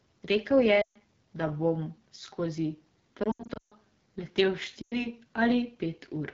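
Throughout, the AMR wideband (HD Voice) codec at 8.85 kbit/s, one of its lowest rates, leaves the speech rough and raspy; a spectrogram shows content ending near 7 kHz, with noise-like texture above 6.4 kHz.

Lost AMR speech frames first hit from 0.82 to 0.97 s, just before "da bom skozi": about 140 ms where the decoder repeats the last sound at falling gain, dropping to near silence within two frames. From 3.23 to 3.74 s, right after "da bom skozi", losses totalling about 300 ms scatter across roughly 480 ms, the longest run 140 ms, producing repeated warbles and dropouts with gaps in the waveform envelope. From 4.81 to 5.07 s, about 100 ms of loss drops to near silence, and the voice comes back weak or rough.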